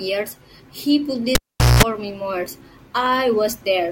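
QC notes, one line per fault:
1.35–1.83 s, cable pulled and plugged in: a live cable lost its connection and was pushed back in. A pop opens about 0.43 s of near silence, including 0.20 s of 60 Hz mains buzz while only the plug tip touches, and a second pop as the speech returns.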